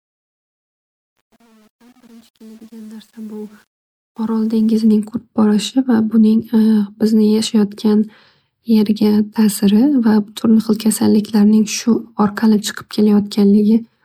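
From the start to 4.88 s there's truncation distortion on a fade. The fade stage was truncated without dither, consistent with about 8 bits, so the quietest stretch, up to 3.78 s, breaks into coarse steps and sounds gritty. Around 2.33 to 2.36 s you get pre-echo. The codec spread its block noise ahead of a sharp attack, so a 22 ms hiss leads in and the onset smears.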